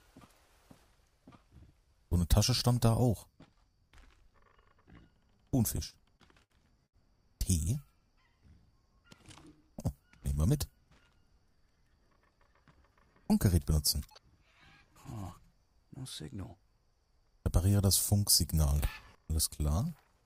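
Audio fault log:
5.77–6.96 s, repeated stalls (stutter): seven brief holds, longest 73 ms, as late packets emptied the buffer; the spectrogram shows short frozen, smeared stretches.
18.83–19.15 s, sudden gain jump: sound and noise floor step up about 14 dB together, likely an unramped digital gain change; the waveform envelope jumps abruptly.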